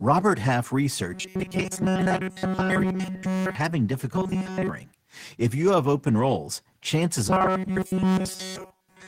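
From 1.14 to 3.55 s, 4.16 to 4.69 s, and 7.28 s to the end, the speech turns into a rigid metallic buzz locked at 188 Hz. This is robotic sound from repeated short buffers, likely a roughly 5.3 ms slice looped almost continuously while incoming audio is skipped.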